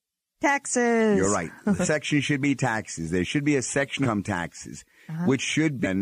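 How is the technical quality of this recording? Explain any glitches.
The speech is marred by three jumps where audio goes missing. These compressed frames skipped occur at 1.84 to 1.88 s, 4.02 to 4.06 s and 5.83 to 5.86 s. They drop roughly 0.4, 0.5 and 0.4 s, consistent with about ten lost 46.4 ms codec frames each. Unlike a dropout, there's no silence. The speech leaps ahead at each join.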